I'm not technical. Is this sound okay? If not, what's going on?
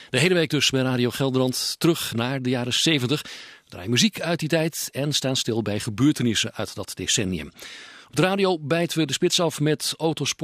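Yes, nothing stood out as a problem when listening to this sound.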